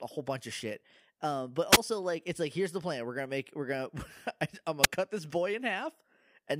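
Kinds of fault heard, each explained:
Wireless microphone squelch dropout at 1.72–1.77 s and 4.82–4.87 s: the FM radio link weakens, hiss rises briefly, then the receiver's squelch mutes the output, leaving a 10 ms hole after "of shit uh but" and a sub-millisecond gap before "cut this boy".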